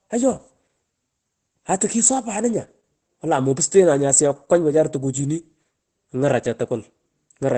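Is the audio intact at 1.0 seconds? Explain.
No. At 1.0 seconds the speech carries Opus voice compression, which runs through the whole clip. The linear-prediction coder cuts everything above 8.6 kHz and codes the excitation coarsely, which fits a low bitrate near 12 kbps. The voice sounds muffled, hoarse and slightly robotic.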